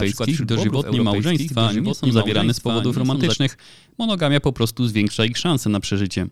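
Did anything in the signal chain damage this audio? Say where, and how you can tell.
Yes. From the very start until 3.34 s, the speech plays over a second copy of itself, about 5 dB quieter and trailing by roughly a second. That copy is full-band and dry, with no decay or room colour, and it cuts off abruptly at 3.34 s. This is a doubled audio track, likely from the capture stage picking up the same signal twice, once through a slower path, and mixing both at a fixed offset.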